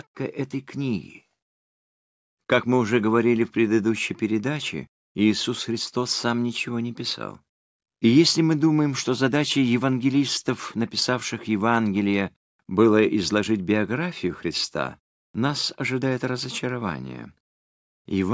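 No technical faults can be heard anywhere in this recording.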